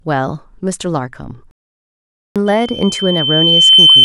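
At 1.51 s the speech cuts to silence for about 0.85 s, resuming at 2.36 s, a playback stall, likely the player starving for data or blocked. From 2.46 s to the end, a single 3.1 kHz tone swells over roughly 1.5 s to about 10 dB above the speech: loudspeaker feedback squeal, the microphone re-amplifying its own loudspeaker.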